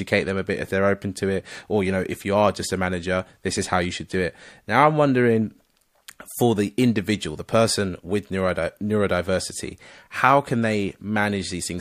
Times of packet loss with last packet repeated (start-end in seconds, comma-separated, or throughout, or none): none